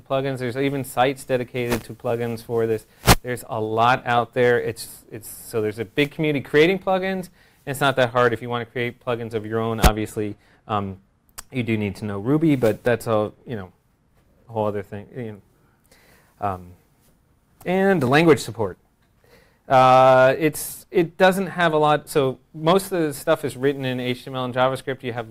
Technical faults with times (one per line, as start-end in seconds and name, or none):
10.09 overlap between stream segments
18.07 overlap between stream segments
22.07 overlap between stream segments